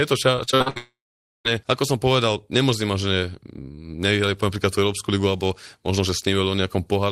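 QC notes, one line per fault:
0.35–0.78 s, repeated packet loss (robotic sound): six short gaps in quick succession, the longest 58 ms, each patched by stretching the preceding sound. Nearly half this span is concealment, so the speech turns choppy, with fragments missing between repairs.
0.78–1.47 s, long network dropout: the sound is carried on as a fading artificial tail, then goes silent for about half a second. This is likely a stalled stream whose missing audio was never recovered. Speech resumes at "ako som povedal nemôžem", with the lost stretch simply absent.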